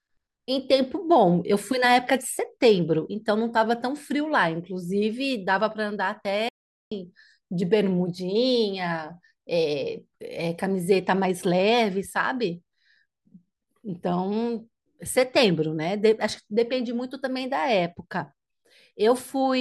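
At 6.49 s the player likely ran short of data, causing a playback stall: the speech cuts to silence for about 430 ms, resuming at 6.92 s.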